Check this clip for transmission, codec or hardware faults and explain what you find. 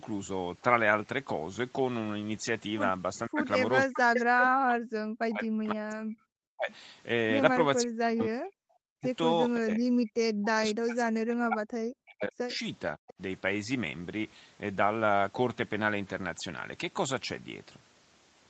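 Two call-path faults are audible in this speech clip: repeated suppression during double talk and brief echo leaks. The content ending near 8 kHz fits a wideband Opus call path.

Speech suppressed in double talk occurs at 3.28–3.39, 3.84–6.7, 7.83–9.06, 9.58–12.5 and 12.96–13.21 s. The speech dips by up to about 40 dB. This is likely an echo canceller that mistook the talker for loudspeaker echo and attenuated everything. A waveform shows sudden collapsed envelopes, and a spectrogram shows dark gaps.

The echo leak appears at 4.15–4.49 s as a delayed copy of the speech arriving 531 ms later at about the same level. Fainter scraps follow at 12.5 s (580 ms delay) and 13.1 s (584 ms), well below the speech. Residual loudspeaker pickup likely escaped cancellation. A spectrogram shows a ghost repeat of earlier harmonic patterns.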